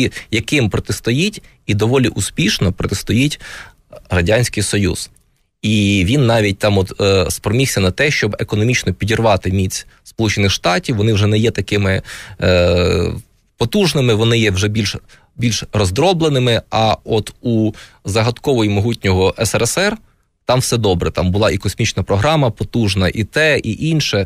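Listening through this speech recording, nothing stood out as a technical problem at any point.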